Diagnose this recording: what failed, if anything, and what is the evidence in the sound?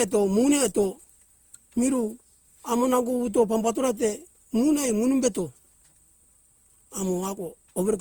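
The codec stage is where it went wrong: the speech sounds swirly, smeared and hollow all the way through, with softened attacks, more than its roughly 48 kbit/s Opus character explains. That points to generation loss, likely from being re-encoded about five times.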